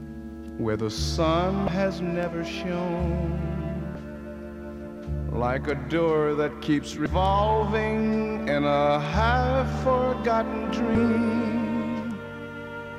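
Damaged data in a compressed stream produces brief glitches in the audio at 1.65–1.68, 3.92–3.95, 7.03–7.06 and 10.92–10.95 s, where corrupted frames throw the decoder out of sync until it finds the next frame header.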